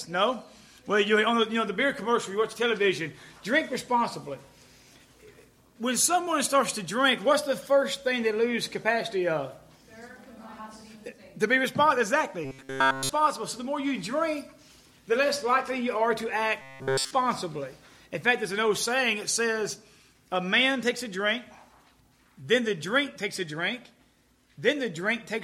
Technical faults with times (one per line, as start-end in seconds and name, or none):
12.45-13.09 robotic sound from repeated short buffers
16.61-17.12 robotic sound from repeated short buffers